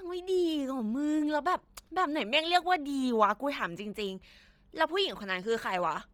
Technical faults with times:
0.00-6.14 Bluetooth LC3 compression

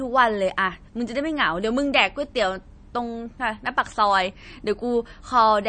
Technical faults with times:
0.00-5.68 MP3 compression

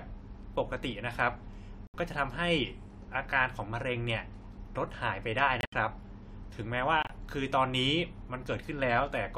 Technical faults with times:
1.87-1.95 corrupt frame muted
5.61-5.73 corrupt frame muted
7.02-7.11 corrupt frame muted

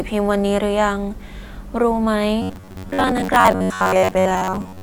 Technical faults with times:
2.42-4.82 robotic sound from repeated short buffers

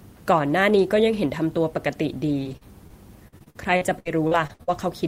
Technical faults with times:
2.27-4.79 repeated packet loss (robotic sound)

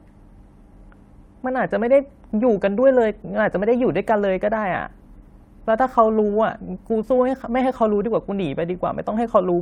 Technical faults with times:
none

